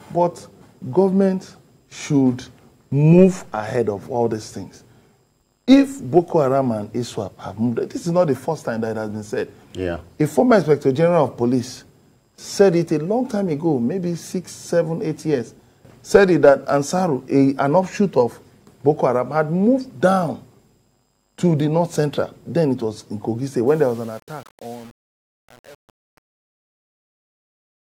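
Truncation distortion on a fade runs from 23.68 s to the end at 27.96 s, across the fade-out. The gain stage doing the fade discards low-order bits without dither, and the coarseness points to only 7 bits kept. As the level drops, the waveform collapses into a few square steps, so the tail turns gritty rather than thinning away smoothly.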